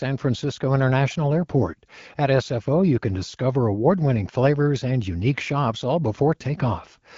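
No technical faults can be heard anywhere in this speech.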